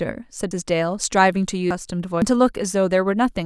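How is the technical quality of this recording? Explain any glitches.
The recording has three audible glitches. At 0.51, 1.71 and 2.22 s, abrupt jumps skip roughly 150 ms, 300 ms and half a second of speech. The likely cause is a dropped buffer (overrun): unread input samples were overwritten, splicing the surrounding sound together without silence.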